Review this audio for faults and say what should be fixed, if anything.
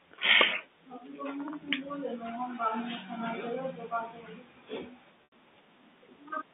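Packet loss with pitch repetition from 5.24 to 5.32 s: an 80 ms gap, which fits four 20 ms packets, bridged by repeating the last pitch period, which fades toward silence before speech cross-fades back in over the narrowband G.711 line. To prevent it, add jitter buffering and forward error correction or redundancy on the network path.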